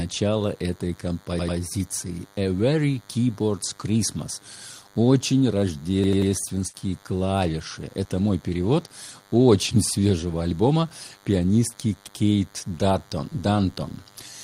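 A thin, steady buzz at 100 Hz with a dense stack of harmonics sits under the speech for the whole clip, about 30 dB below it. This is DECT cordless phone buzz: a nearby handset or base station transmits a radio burst every 10 ms, and the audio circuitry rectifies those bursts into sound.

From 1.39 to 1.58 s the speech stutters, with the same short fragment heard three times in a row and a hard join at each restart. This is a repeated buffer. New audio arrived late, so the device replayed its last block twice more. The roughly 93 ms repeat fits a 4096-sample buffer. Nothing is skipped afterwards. The same stutter returns from 6.04 to 6.32 s, this time with three extra plays of the fragment.

Just after, from 6.67 to 6.76 s, the sound is stretched and fades away for about 56 ms, then picks up further along with roughly 60 ms gone. This is a burst of packet loss. Consecutive packets failed to arrive, so the receiver extended the last sound while turning it down, then resumed past the gap.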